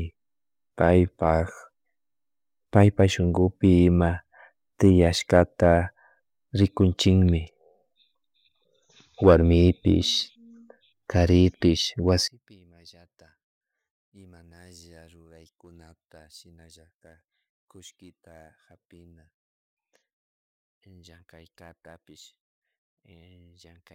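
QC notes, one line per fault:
12.28 to 23.94 s, one channel inverted: speech drops about 32 dB in mono to the end, likely one channel's polarity flipped, cancelling the centred voice.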